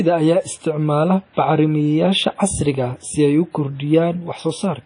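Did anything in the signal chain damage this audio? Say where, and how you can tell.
Yes, at the codec stage, throughout the speech. Nothing sounds above 10.1 kHz, and the whole clip has a ringing, washy hiss that breathes with the signal, which points to likely WMA compression at a low bitrate, around 32 kbps. Unlike a plain low-pass filter, weak components are zeroed and the quantisation noise smears across long transform blocks.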